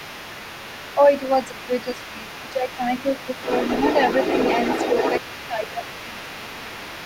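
Right from the start, and for the whole clip, there's the other side's voice leaking through underneath the talker, only a few decibels quieter than the main speech. The far end's audio is likely being played on the talker's loudspeaker and picked up again by the microphone, with the echo canceller failing to strip it out, so you get a second voice running along the whole way.

Layered on that is speech suppressed in double talk, at 0.95 to 1.09 s, 1.49 to 2.82 s, 2.98 to 3.04 s, 5.29 to 5.83 s and 6.03 to 6.29 s. In each spot the talker's level sinks by up to around 10 dB. The first and third are quick blips, the 1.49 s stretch is the longest with the voice pulled down for a good part of it, and the two near the end are shorter dips. That's likely the canceller hearing both ends at once, not telling the near talker from the echo, and ducking the lot.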